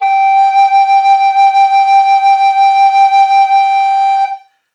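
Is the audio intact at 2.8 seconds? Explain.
Yes, at 2.8 seconds the music plays through without any dropout, click, distortion or other audible fault.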